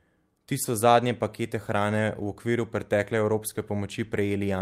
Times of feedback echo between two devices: none

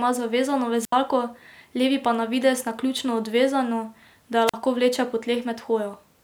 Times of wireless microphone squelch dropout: 0.81-0.92, 4.47-4.54

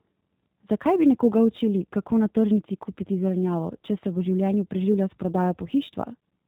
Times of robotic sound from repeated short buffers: none

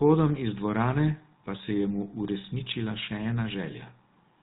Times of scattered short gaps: none

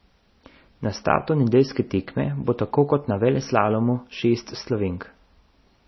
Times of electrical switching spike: none

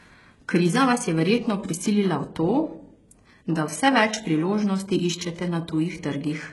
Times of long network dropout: none

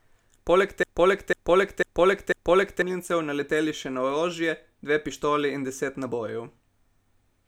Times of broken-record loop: 0.83-2.82

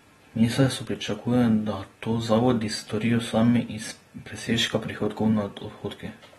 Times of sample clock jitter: 0.91-5.49

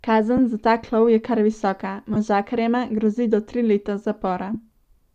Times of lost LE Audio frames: 0.37, 2.14-2.16, 4.54

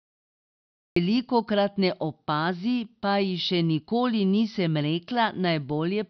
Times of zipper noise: none

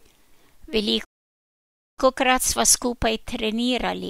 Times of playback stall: 1.04-1.99

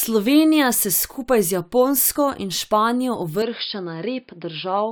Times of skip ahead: none

